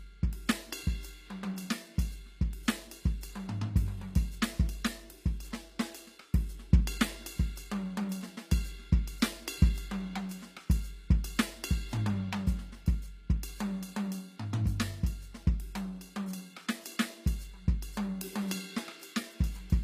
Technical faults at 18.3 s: HE-AAC compression

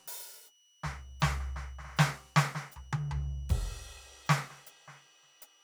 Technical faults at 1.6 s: switching supply whistle

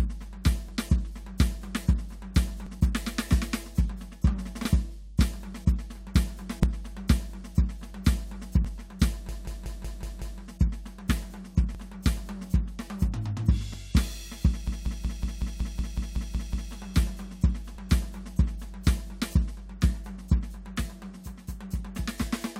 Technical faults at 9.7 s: system hang loop

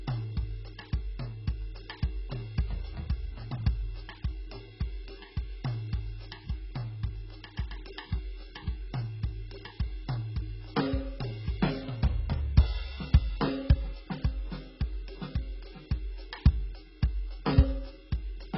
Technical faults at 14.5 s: AAC compression

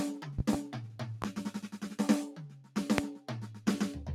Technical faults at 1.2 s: noise suppressor applied to music or sounds; loud pop

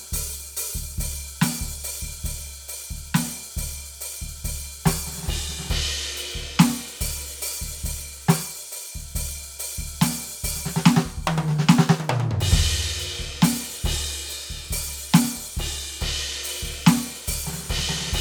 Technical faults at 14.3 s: none

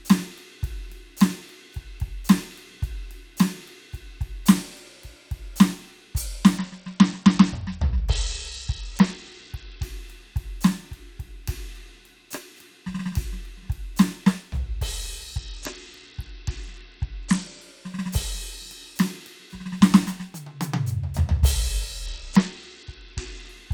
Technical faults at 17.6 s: Bluetooth SBC bit pool drop

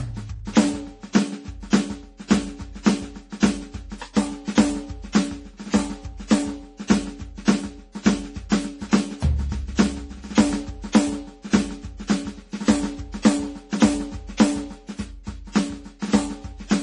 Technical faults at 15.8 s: MP3 compression

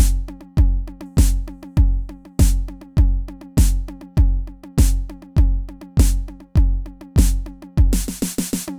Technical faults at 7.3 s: none

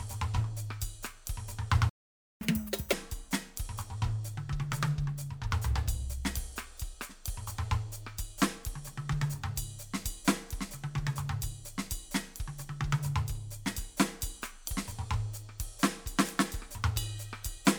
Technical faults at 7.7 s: none

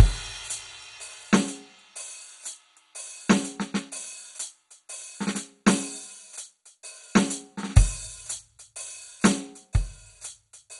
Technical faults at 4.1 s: MP2 compression

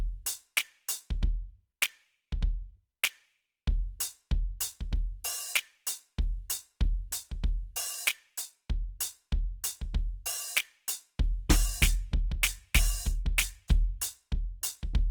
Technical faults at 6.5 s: Opus compression

